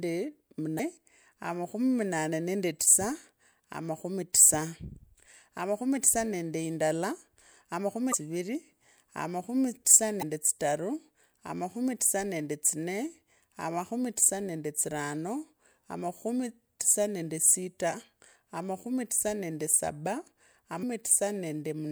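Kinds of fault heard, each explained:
Damaged data in a compressed stream: corrupted bytes make the decoder misread frames and lose sync, giving 40 ms glitches at 0.76, 8.10, 10.19 (after "amakhumi tisa") and 20.80 s.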